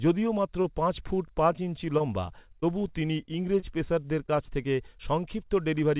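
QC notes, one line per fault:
0.62–0.71 s, short stall from a late packet: a packet arrived late and the jitter buffer ran dry, so the receiver stretched the last sound for about 22 ms, then resumed where it left off. Nothing is lost, but the sound is held slightly long with a slight buzz or dip.
1.98 s and 4.26 s, short concealed packet loss: about 20 ms went missing each time, and the receiver filled the hole by extending the preceding sound before blending back in, leaving a brief smear or wobble at each spot.
2.60–3.64 s, scattered short gaps: roughly four small losses, none much longer than 20 ms and about 40 ms missing in all, each patched by continuing the last sound. Around 7 percent of this stretch is filled in, heard as brief hiccups and smears. Through the whole clip the call codec's band limit is audible, with nothing above 4 kHz, fitting G.711 mu-law at 64 kbps.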